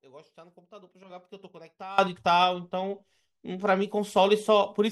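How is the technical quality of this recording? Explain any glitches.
The recording has a clear fault. At 1.98 s a sudden gain jump of about 22 dB occurs, likely a digital gain setting applied instantly with no ramp. From there to the end, the speech and its background noise both leap louder together.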